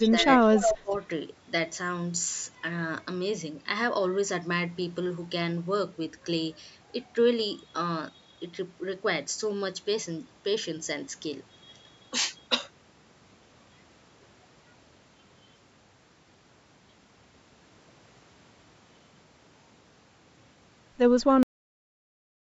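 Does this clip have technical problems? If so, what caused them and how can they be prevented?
Yes, three kinds of problem.

From 0.0 to 0.1 s and again from 0.41 to 0.96 s there's echo leak. A copy of the speech trails about 0.23 s behind, faint at first and then only a little quieter than the talker. It's likely a loudspeaker echo that slipped past the far side's echo canceller. A headset on that end would stop it.

Speech suppressed in double talk shows up at 0.11 to 0.29 s, 0.48 to 0.54 s and 0.81 to 0.91 s. The speech dips by roughly 5, then 10, then 20 dB, likely because the canceller turned everything down while both sides overlapped. Better double-talk handling in the canceller, or a headset, would prevent it.

At 21.43 s there's a cut-off end. The audio stops mid-sound and drops straight into digital silence, since the last buffers never got written. Flushing and closing the recorder properly before stopping would prevent this.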